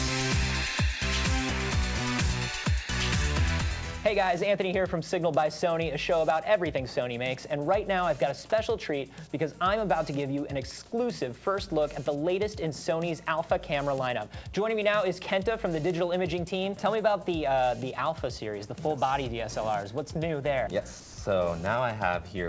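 At 2.64 s a 20 ms slice of the sound turns to flat, steady noise. From 21.00 to 21.18 s a longer patch does the same, swallowing 80 ms of real sound. Both are likely sound dropped by the voice detector, with comfort noise filling the gaps.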